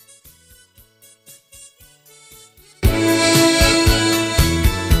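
From 0.00 to 2.83 s, one channel inverted is the likely cause: one side of a stereo pair had its polarity reversed, so the shared content cancelled when the two were summed to mono. The sound drops by about 30 dB, leaving only the residual difference between the channels.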